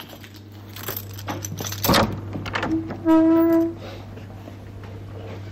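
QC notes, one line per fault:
1.85 to 2.04 s, hard clipping: a harsh, buzzy fuzz on the loud sound, as peaks driven about 12 dB past the limit are sliced flat, adding high harmonics.
3.09 to 3.59 s, hard clipping: a crackly edge on peaks, milder than before, from about 6 dB of overload flattening the waveform tops.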